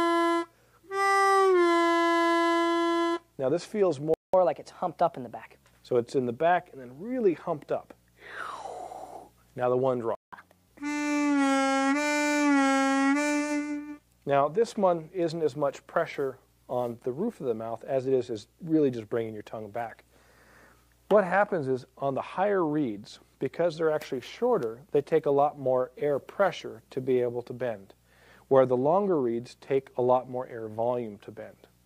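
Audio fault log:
4.14 to 4.34 s, playback stall: the sound cuts out mid-flow for about 0.2 s, then resumes. The output likely went silent because the player ran short of buffered data or its audio thread was briefly held up, leaving nothing to play until it recovered.
4.34 to 5.64 s, catch-up at higher speed: right after the gap the sound runs fast at 1.15 times normal speed and about two semitones sharp, then settles back. The player is resampling its backlog to win back the time lost in the stall, so tempo and pitch rise together.
10.15 to 10.33 s, playback stall: a second dropout of about 0.17 s stops the sound mid-flow before it picks up again. This gap likely comes from the same kind of data shortfall or blocked playback thread as the first.
10.33 to 10.68 s, catch-up at higher speed: a brief, sharp rush at 1.5 times speed, pitched up by roughly seven semitones, before returning to normal. 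This recovery packs the lost time into a much shorter burst, so the speed-up and pitch jump are much larger than after the first stall.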